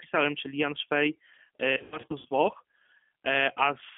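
G.729 codec damage runs through the whole speech clip. The sound is confined to roughly 300 Hz to 3.4 kHz, and the voice has the slightly rough, synthetic quality of a coder that rebuilds each 10 ms frame from a vocal tract filter, a pitch predictor and a few pulses rather than the actual waveform. The coding damage is plainly audible, and it points to an 8 kbit/s G.729A stream.

VoIP packet loss concealed by the speech codec affects 1.77 to 2.27 s. About 240 ms of audio went missing, scattered across that 480 ms stretch, with the longest single gap about 90 ms, which fits several lost packets. At each gap the decoder keeps repeating its last pitch and filter while lowering the gain, so the voice smears into a buzzy tone or coloured noise that fades. Because each frame builds on the previous one, it stays weak or distorted for a while after each gap.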